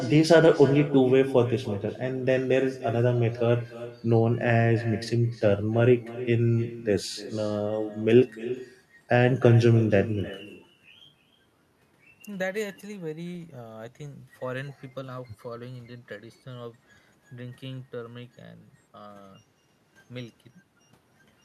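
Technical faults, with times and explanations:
Throughout, echo with no canceller: every phrase of speech returns roughly 300 ms later as a separate, quieter copy, about 15 dB down, thinner than the original. The far end's loudspeaker feeds its microphone, and with no echo cancellation that pickup travels back across the network. The clear gap before the repeat, and its discrete, delayed character, set it apart from ordinary room reverberation, which smears directly onto the sound without a distinct second arrival.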